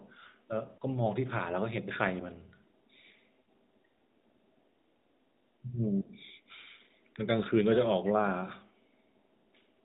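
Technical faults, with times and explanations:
No faults detected; the speech runs through an AMR narrowband mobile codec path at 12.2 kbps, band-limited to 4 kHz as that codec dictates.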